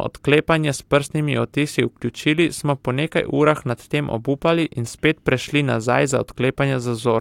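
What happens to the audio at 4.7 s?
Nothing goes wrong at 4.7 s; the speech runs through that moment intact, with no dropout, click, distortion or other audible fault.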